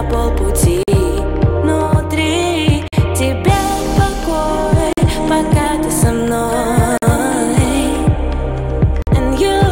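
At 0.83, 2.88, 4.93, 6.98 and 9.02 s, the sound stops for 48 ms. This is a gap between chunks. The audio comes in 2-second chunks, with silence inserted at each join. Nothing is lost.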